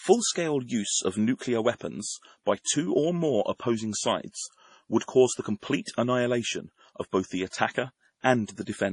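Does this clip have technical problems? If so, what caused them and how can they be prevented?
Yes. Throughout the speech there is heavy damage, likely from MP3 compression: nothing sits above 10.5 kHz, and weak frequency lines drop in and out between frames, giving a watery, swirling sound that fits a bitrate near 32 kbps. A spectrogram shows a flat ceiling at 10.5 kHz with speckled, flickering gaps below it. To prevent it, keep the audio in a lossless format or encode at a much higher bitrate.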